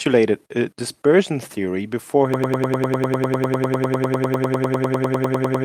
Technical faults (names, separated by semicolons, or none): broken-record loop